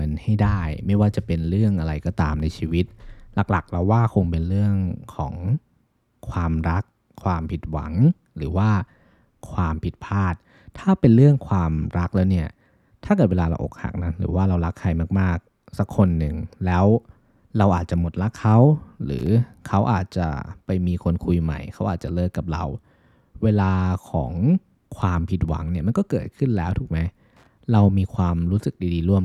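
At 19.19 s and again at 27.37 s, the speech is hit by loose connector crackle: a worn or dirty contact intermittently opening and closing, chopping the signal into an irregular scratchy burst lasting about 80 ms and then about 100 ms. On a waveform each burst shows as a cluster of jagged, sharp-edged spikes and dropouts. A spectrogram shows ragged vertical broadband streaks across the full frequency range.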